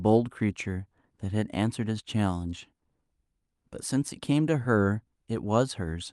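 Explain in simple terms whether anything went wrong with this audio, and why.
Nothing went wrong with the speech in this recording, and no faults can be heard anywhere in it.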